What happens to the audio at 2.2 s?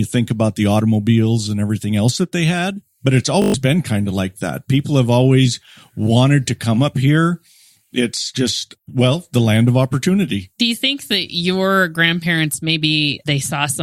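Nothing goes wrong at 2.2 s; the speech there plays through intact, with no dropout, click, distortion or glitch.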